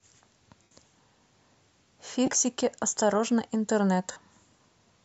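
At 0.63 s the speech hits a gap of about 80 ms of lost LE Audio frames, which fits 7.5 ms frames dropping out over Bluetooth. The LC3 decoder covers it by replaying the last spectrum with scrambled signs, so the voice smears into a noisy buzz and then fades. The same thing happens from 2.26 to 2.40 s, broken into short dropouts of roughly 30 ms at most, and again at 4.11 to 4.16 s for about 45 ms. The light lossy compression sits underneath.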